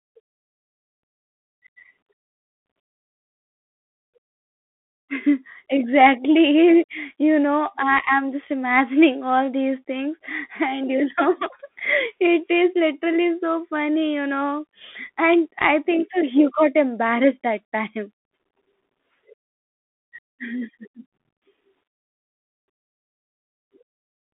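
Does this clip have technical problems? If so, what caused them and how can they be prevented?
Yes. Throughout, the speech carries Bluetooth CVSD headset codec damage: sound is confined to roughly 250 Hz to 3.5 kHz with nothing above 3.8 kHz, and the one-bit up/down step coding, which fits a 64 kbps CVSD link, leaves scratchy s sounds and a granular hiss. A plain telephone band-limit would narrow the sound just as much but without that hiss or slope distortion. Record through a wired microphone, or use a wideband Bluetooth profile such as mSBC or LC3 instead of the CVSD headset link.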